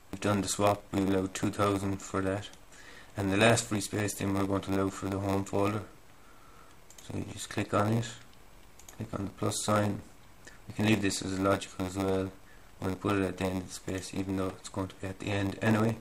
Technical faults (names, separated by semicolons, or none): block size mismatch (padded)